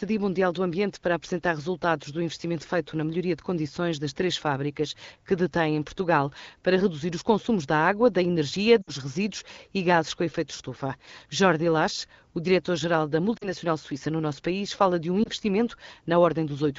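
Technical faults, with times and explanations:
8.82 to 8.91 s, lost AMR speech frames: after "da água da energia", about 60 ms of frames, likely three, is concealed, so the sound dips to near silence before "resíduos e gases com" resumes.
13.37 to 13.48 s, lost AMR speech frames: about 40 ms is filled by repeating the last good pitch and vocal-tract settings with falling gain, giving a drop to near silence just before "suíça no nosso país".
15.23 s, lost AMR speech frames: after "país fala de um", a single 20 ms frame is concealed, giving a short dip while the 12.65 kbit/s wideband decoder recovers.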